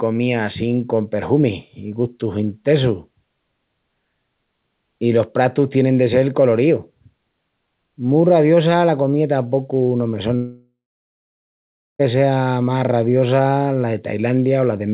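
At 10.36 s the speech breaks off. The last sound carries on briefly as a fading buzz, then gives way to about 1.25 s of silence. Speech returns at 12.01 s, with roughly 1.6 s of it simply gone. This is a long network dropout, likely caused by packets failing to arrive during a call. The receiver stretched the final audio to cover the gap, and then had nothing left to play.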